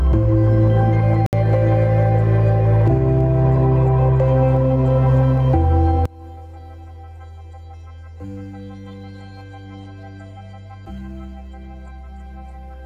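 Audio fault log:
Throughout, gain pumping. The gain swings by around 10 dB. Loud and quiet passages end up close in level, so the sound feels squashed. The likely cause is gain set far too high, with a fast limiter pulling it down on every peak.
1.26 to 1.33 s, Bluetooth stall. The sound cuts to silence for about 66 ms, then carries on. The likely cause is radio interference that held up packets. The headphone buffer ran empty, and playback paused until the resent data arrived.
6.05 s to the end, one channel inverted. The level suddenly falls by about 29 dB, and only a faint residue of the sound is left. One channel's polarity is likely reversed. When the channels are summed to mono, whatever is common to both cancels, leaving just their difference.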